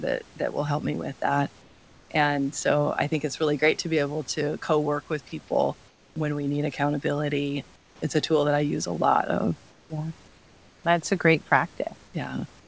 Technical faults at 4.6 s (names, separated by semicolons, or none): none